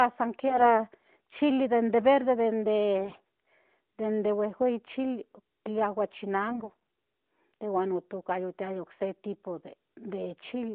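Speech carried over an AMR narrowband mobile link, band-limited to roughly 200 Hz to 3.7 kHz. It has two bursts of AMR bit errors, at 0.48 to 0.75 s and 6.48 to 6.77 s, each lasting under 0.3 s. Pitch and level hold, but the sound turns hoarse and gargly. The likely cause is a weak radio link flipping the lightly protected bits of each frame at something like 10% and 7% of bits respectively. This misplaces the excitation pulses and skews the fine gain and spectral values.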